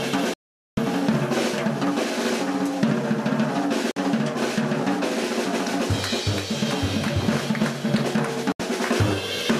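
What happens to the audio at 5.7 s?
Nothing goes wrong at 5.7 s; the audio plays through that moment intact, with no dropout, click, distortion or other fault.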